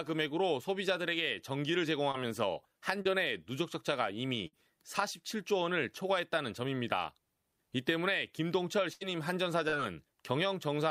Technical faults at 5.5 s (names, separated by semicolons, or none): none